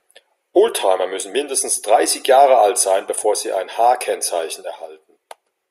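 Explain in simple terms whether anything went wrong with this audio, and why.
Nothing went wrong with this audio.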